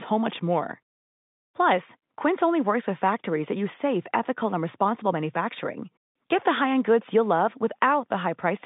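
Nothing in this speech recording stands out as a technical fault. It has the sound of a G.711 mu-law telephone line at 64 kbps, with the band held to roughly 150 Hz to 3.7 kHz and at most a faint trace of the coding itself.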